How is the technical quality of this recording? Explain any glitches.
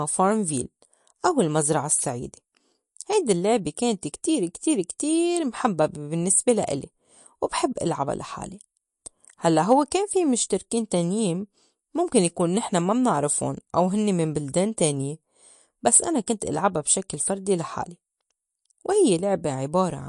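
The recording has clear technical flaws: plainly audible lossy coding damage throughout, plus two brief pre-echo glitches.

MP3 compression, likely at a low bitrate around 48 kbps, runs through the whole speech clip. Starved of bits, the encoder cuts all content above 11.2 kHz and drops weak frequency detail that flickers between frames, leaving plainly audible watery, swirly artefacts and dulled, smeared consonants.

Pre-echo appears at 4.98 s and 16.26 s. The codec spreads its quantisation noise across each coding block, so when a sharp onset lands late in a block, noise leaks into the quiet just before it. A short hiss precedes each attack by about 13 ms and 11 ms, softening it.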